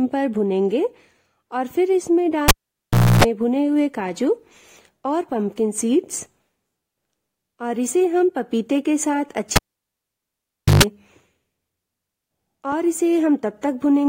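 At 2.48 s and 9.56 s a cable is pulled and plugged in: a vertical-spike pop, a flat near-silent gap (0.70 s, then 1.22 s), horizontally striped 60 Hz then 50 Hz buzz, and a closing pop.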